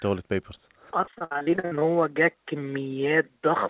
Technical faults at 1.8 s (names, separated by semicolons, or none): repeated packet loss (robotic sound)